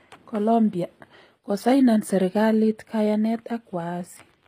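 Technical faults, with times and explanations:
Throughout, HE-AAC compression: the treble sounds synthetic and gritty, with plainly audible coding damage and nothing above 15.5 kHz. This is likely a spectral band replication codec, which rebuilds the highs from copied lower bands, at a low bitrate around 24 kbps.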